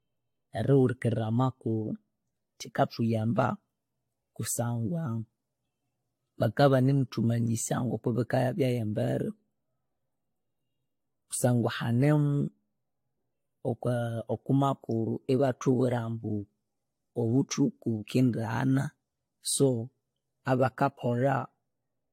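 Speech, with generation loss throughout: swirly, hollow, smeared attacks and nothing above 16.6 kHz, likely from about three successive AAC-LC encodes, consistent with 64 kbit/s.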